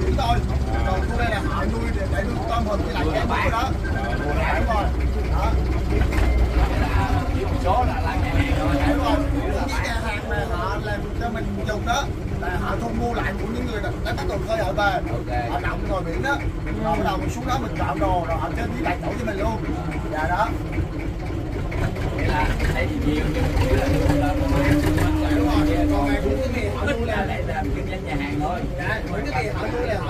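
No technical faults can be heard anywhere in the audio. Nothing in the sound points to a problem in how it was captured, processed or delivered.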